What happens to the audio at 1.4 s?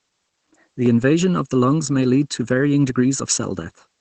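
At 1.4 s, one channel is running late by under a millisecond and summing to mono, the channel delay (comb filtering) that starts at 0.86 s and lasts to the end. Notches from around 700 Hz upward make the speech hollow and phasey.

The speech is also squeezed through Opus voice compression at a low bitrate, which fits about 12 kbps. It has nothing above 9.2 kHz and sounds muffled, hoarse and slightly robotic.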